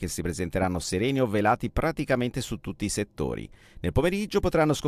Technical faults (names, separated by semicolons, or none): none